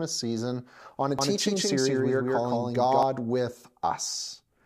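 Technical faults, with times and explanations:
1.19 to 3.03 s, doubled audio track: Right after "season on a", a second full-band copy of the speech trails about 150 ms behind, at roughly equal loudness. It carries no decay or room colour. It starts and stops abruptly. Likely a slower second capture path.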